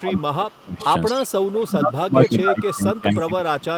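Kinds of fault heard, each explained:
Speech suppressed in double talk: from the start to 0.82 s and again from 1.11 s to the end, the speech dips by up to about 25 dB. This is likely because the echo canceller, faced with both sides talking at once, could not tell the near talker from loudspeaker echo and turned everything down.
Echo leak: at 0.5–0.6 s, 0.81–0.85 s, 1.15–1.28 s and 2.62–2.72 s, a copy of the speech returns 228 ms late, about 35 to 15 dB below the speech, likely because a far-end echo canceller left part of its microphone's loudspeaker pickup unremoved.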